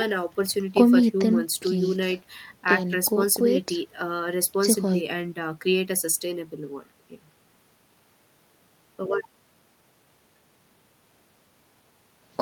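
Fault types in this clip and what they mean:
No technical faults are audible in this recording.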